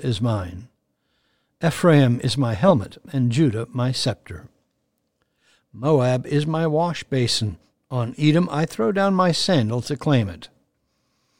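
From 0.17 s to the end, faint clock slip clicks tick about five times a second. Two unsynchronised clocks likely drift, dropping or repeating single samples.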